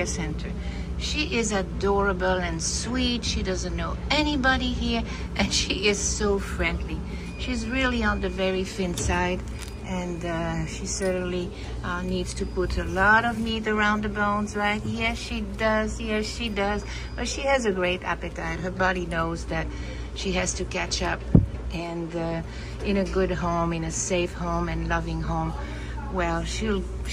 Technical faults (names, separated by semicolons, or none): none